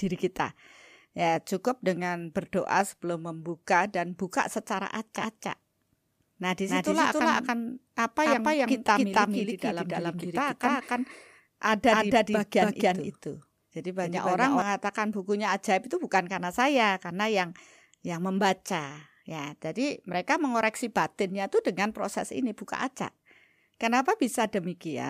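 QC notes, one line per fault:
5.16–14.62 s, doubled audio track: the speech is heard twice, with a second full-band copy trailing about 300 ms behind at roughly the same level as the original. Each syllable comes back as a clean repeat with no decay or room colour, not as an echo tail, so the result sounds like two takes laid over each other. The copy cuts in and drops out abruptly, and the start falls just before "bukunya ajaib itu bukan". On the waveform each burst of speech is followed by a twin of equal height about 0.3 s later. On the spectrogram every harmonic and onset pattern appears twice, offset by that same fixed gap, across the full frequency range. This is likely caused by the audio being captured a second time through a slower path or by an edit that left two copies out of step.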